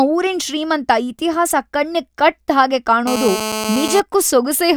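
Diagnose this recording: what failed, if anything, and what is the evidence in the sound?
Analogue wiring picked up GSM phone buzz from 3.07 to 4.00 s: a steady, harsh 217 Hz rasp about 6 dB below the speech, from a nearby phone's call bursts getting rectified.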